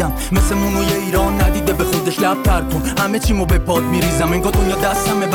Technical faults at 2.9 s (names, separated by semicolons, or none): none